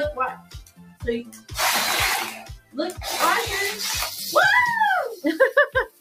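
A speech-oriented noise suppressor has been left running on this audio, which is not speech. It treats sustained, steady material as unwanted noise, so the level keeps lurching by roughly 10 dB as the processor decides what to keep. Onsets pass while held portions and tails are pulled down, which gives a pumping, thinned character throughout. On a waveform the envelope looks uneven, with sharp attacks followed by decays that collapse too early. On a spectrogram, sustained partials and the diffuse energy between events fade or flicker. The clearest cases of sound cut by the noise suppressor are at 0.35 to 1.04 s, where the level dips by about 16 dB, at 1.24 to 1.53 s, by about 13 dB, and at 2.37 to 2.77 s, again by about 16 dB. In each stretch the steady part of the sound sinks well below its surroundings. These show up as visibly hollowed sections of the waveform and as darkened bands across the spectrogram.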